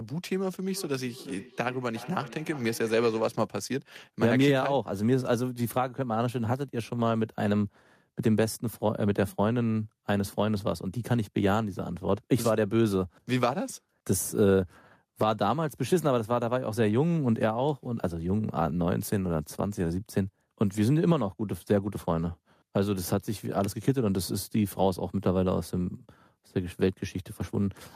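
Speech recording with feedback echo between two devices from 0.71 to 3.45 s. The speech returns at a fixed spacing of roughly 400 ms, peaking at about 17 dB below the direct speech. A second device in the same room is on the same call, and its loudspeaker output reaches this microphone. The local echo canceller only removes sound from its own device, so the playback loops back into the call uncancelled.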